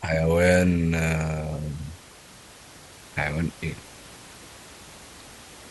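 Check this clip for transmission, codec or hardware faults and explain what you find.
Checking this clip turns up no faults to explain.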